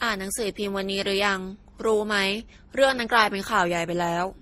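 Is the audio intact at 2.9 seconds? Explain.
No. At 2.9 seconds, as throughout the speech, there is transcoding between lossy codecs, likely an MP3 encode re-encoded to Opus. The later codec re-spends bits on the earlier one's artefacts and adds its own, giving a swirly, grainy texture. On a spectrogram, everything stops at a flat ceiling near 15.8 kHz, with smeared, blotchy detail below it.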